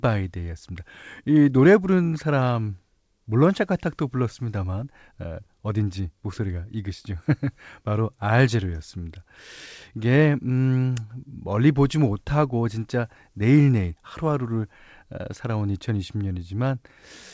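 Nothing stood out on listening to this speech recording, which comes across as having passed through a call path whose wideband coding leaves nothing above 8 kHz.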